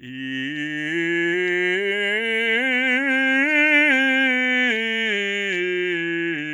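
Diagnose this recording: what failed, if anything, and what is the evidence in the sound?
Nothing failed in this music recording, and the sound gives no evidence of any fault at any stage.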